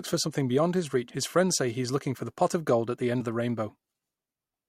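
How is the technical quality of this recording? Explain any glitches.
The recording has two glitches of one kind. Compressed frames are skipped at 1.09–1.15 s, after "for something beyond his", and at 3.20 s, after "gold at the end". Whole coded frames, which points to 10 ms frames, never reach playback, so the speech jumps ahead by about a fifth of a second, then by about seven hundredths of a second. Each join is heard as an abrupt skip in the speech.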